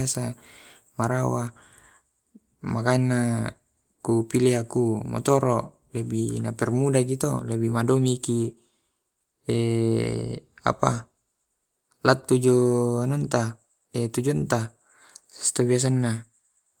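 No technical faults can be heard anywhere in the speech recording, and the signal stays steady and continuous throughout.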